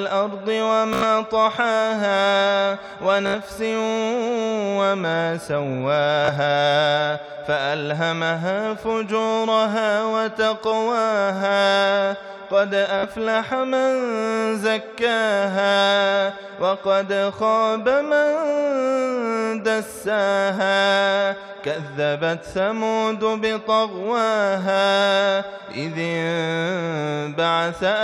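Bluetooth stutter at 0.93–1.04 s, 3.26–3.35 s, 6.25–6.31 s and 12.99–13.06 s: late or dropped wireless packets make the receiver loop its last short buffer, giving a brief buzzing repeat, after which the audio jumps ahead, skipping roughly 30 to 90 ms each time.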